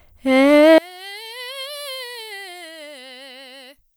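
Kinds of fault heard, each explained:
One channel inverted: from 0.78 s to the end, the music drops by about 28 dB when heard summed, leaving only a faint residue. The likely cause is one stereo channel with reversed polarity, so the shared centre content cancels against itself.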